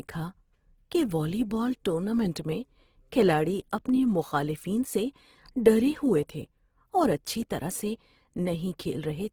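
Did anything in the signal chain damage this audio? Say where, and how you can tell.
Yes, at the codec stage, throughout the speech: Opus compression is the likely cause. The sound is grainy and rough rather than swirling like MP3, because thin bands are filled with noise instead of dropped. Content still reaches about 20.3 kHz, so it stayed in music mode, even at about 16 kbps.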